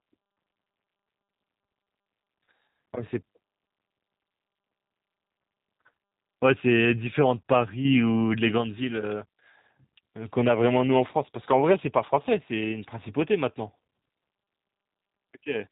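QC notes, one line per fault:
Throughout: G.729 codec. Nothing above 3.8 kHz survives, and the sound is plainly rough and synthetic, rebuilt from a vocal tract model and sparse pulses, which fits an 8 kbit/s G.729A stream. Unlike simple band-limiting, the texture itself is buzzy and coarse.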